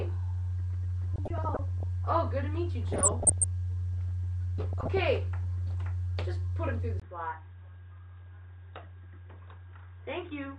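From the start the whole recording is dull and granular, with upper sub-bands flickering in and out. This is most likely MP2 compression starved of bits, and the damage fits a rate around 80 kbps. It is steady throughout, unlike the brief bursts that follow.

DAB burbling breaks in from 1.14 to 1.83 s, 2.92 to 3.44 s and 4.73 to 5.00 s. Residual bit errors corrupt sub-band samples and scale factors, so single bands blip with noise and jump in level for up to a frame. The bursts come and go, where the coding dullness never lifts.

At 7.00 s the sound drops out for 20 ms, then continues to the end about 10 dB quieter and boxier. Nothing above 3.8 kHz remains, and a faint new noise floor appears. The cause is likely an input switched to a poorer device. Because the change happens at one instant and holds, it differs from the steady dullness of coding.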